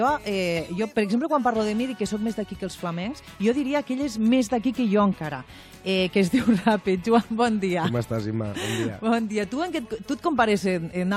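No dropouts, clicks, level jumps or pitch errors are audible anywhere in the clip.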